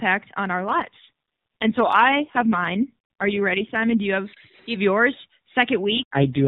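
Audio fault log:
0.54–4.01 s and 5.85–6.47 s (the second just after "have yours"): AMR rate drop. The speech turns rougher and more synthetic with no gap or narrowing of the band. This fits the AMR-NB codec stepping down from 12.2 to 4.75 kbps, leaving fewer pulses to drive its vocal-tract model.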